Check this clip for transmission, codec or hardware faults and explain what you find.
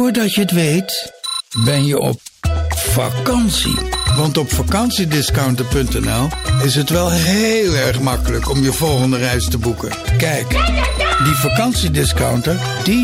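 There's one fault here, a bit error spike at 5.19 s. A single sample got one of its bits flipped somewhere in memory or on a digital link, so its value leapt by a power of two and snapped straight back on the next sample. The result is a lone, sharp tick peaking at about -6 dBFS, broadband and with no connection to whatever the sound is doing at that moment.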